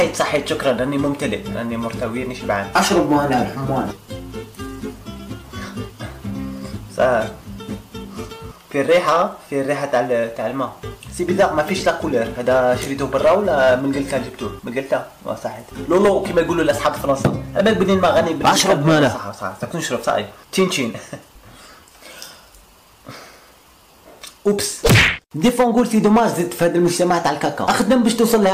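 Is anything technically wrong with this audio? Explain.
Yes. The audio suffers hard clipping throughout. Somewhere in the chain the signal was driven about 9 dB beyond what a converter or processing stage could pass, so every peak that exceeded the limit was sliced flat, with roughly 2 percent of samples sitting at that ceiling. Those squared-off tops generate harmonics high in the spectrum that were never in the original, heard as a harsh fuzz and crackle riding on each loud moment across the whole clip.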